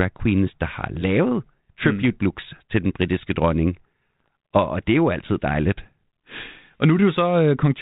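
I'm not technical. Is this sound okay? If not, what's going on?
No. From 4.20 to 4.28 s there are bit errors on an ADPCM link: corrupted bits in the cordless-phone-style coding throw the decoder off, giving popping, gritty roughness with level jumps. Unlike a dropout, the sound never goes silent; it turns harsh briefly.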